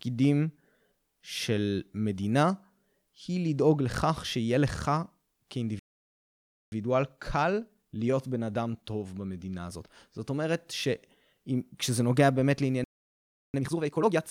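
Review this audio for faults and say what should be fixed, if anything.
Two playback stalls cut the speech off mid-flow: silence from 5.79 to 6.72 s (about 0.93 s) and again from 12.84 to 13.54 s (about 0.70 s). In both gaps the output simply stops and then resumes. The likely cause is the player's buffer running dry or its audio thread being blocked, so that nothing reached the output until it recovered.

Each stall is followed by time-compressed catch-up, where the player drains its backlog by dropping short pieces of audio and cross-fading across the joins. From 6.72 to 9.72 s the speech runs at 1.1 times normal speed, hurried but at unchanged pitch. From 13.54 to 14.22 s the rate jumps to 2.0 times, so the speech is clearly rushed.

To prevent both, give the playback path a deeper buffer and a real-time-priority audio thread that never waits on network or disk I/O, and limit catch-up to a gentle rate spread over a longer interval.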